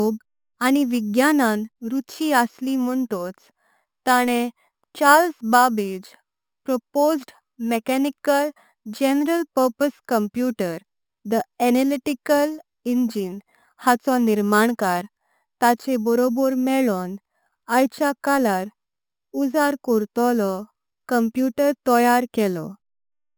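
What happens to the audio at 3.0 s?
Imaging from sample-and-hold upsampling is present at 3.0 s, as throughout the clip. The speech was raised from 12 kHz to 48 kHz by repeating samples unfiltered, mirroring its spectrum into 6–12 kHz and above, about 19 dB down: a metallic fizz tracking the speech.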